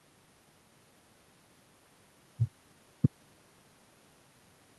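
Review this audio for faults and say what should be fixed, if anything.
No faults turned up in this audio, so nothing needs to be fixed.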